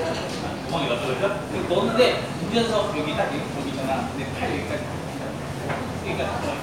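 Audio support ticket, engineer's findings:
No audible faults found; nothing to escalate.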